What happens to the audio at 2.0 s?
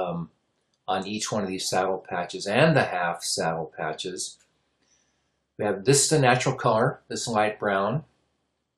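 Nothing goes wrong at 2.0 s: the audio carries on intact through that moment, with no dropout, click or distortion.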